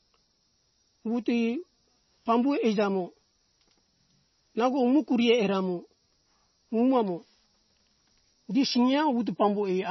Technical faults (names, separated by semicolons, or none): MP3 compression